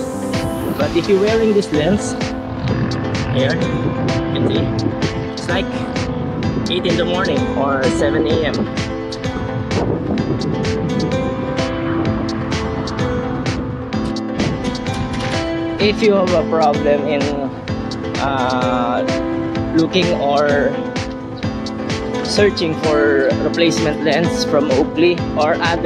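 No technical fault is audible anywhere in the audio.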